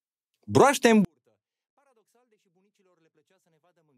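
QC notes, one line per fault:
1.05–3.98 s: 24-bit alignment error (too quiet). The speech stays clean but drops by about 48 dB at once and becomes nearly inaudible. The 24-bit samples sit in the low bytes of 32-bit words and are read as full 32-bit values, shrinking every sample by a factor of 256.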